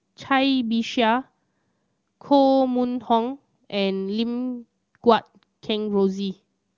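No technical faults occur at any point in the speech, which comes through an AMR wideband (HD Voice) codec path working as it should.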